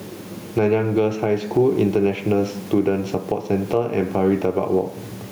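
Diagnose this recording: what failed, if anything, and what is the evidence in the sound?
Gain pumping runs through the whole recording, likely from the microphone input gain being set far too high so that a fast limiter or compressor in the call-processing stage has to clamp down on every loud syllable. Each time the speech peaks, the gain drops by around 15 dB and then recovers in the pauses, with the room noise sitting about 39 dB below the speech, leaving the speech squashed and flat in level.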